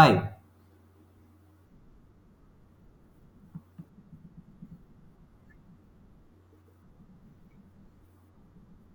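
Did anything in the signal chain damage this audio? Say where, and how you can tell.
Yes. At 2.34 s and 7.64 s the speech jumps abruptly, most likely a dropped buffer (overrun) at the driver or buffer stage. The capture software didn't collect its samples in time, so the hardware overwrote them and the surviving audio was spliced straight together. The first skip loses roughly a hundredth of a second, the second about twice that. No silent gap appears, which rules out a dropout or muted packet.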